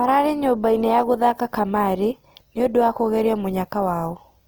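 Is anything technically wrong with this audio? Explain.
Yes. Opus compression, throughout: the speech turns plainly rough and grainy. This is likely Opus music mode near 16 kbps, filling starved bands with folded energy and noise.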